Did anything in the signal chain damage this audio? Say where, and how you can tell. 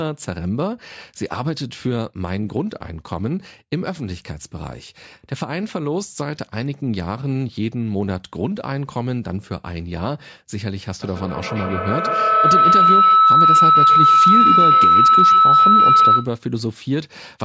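Yes, there's a feedback howl in the call path from 11.02 to 16.42 s. A tone around 1.5 kHz swells to about 9 dB over the speech, with the loop repeating roughly every 150 ms. That points to two devices in one room, each re-amplifying the other until the loop was broken.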